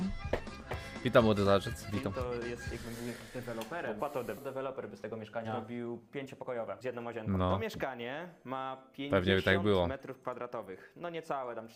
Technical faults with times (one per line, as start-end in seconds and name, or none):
4.37-4.39 skip ahead
4.47-7.95 jitter buffer speed-up